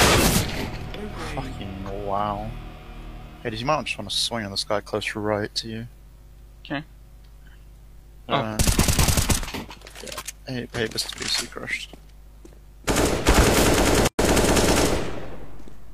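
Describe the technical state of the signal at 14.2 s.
At 14.2 s the signal has just come out of a gap at a join of encoded pieces. The gap runs from 14.07 to 14.19 s, about 115 ms. Two separately encoded pieces were butted together untrimmed. The encoder's start-up delay and the padding of its last frame both remain. The sound drops out abruptly, with edges smeared by the codec. It then resumes exactly where it stopped.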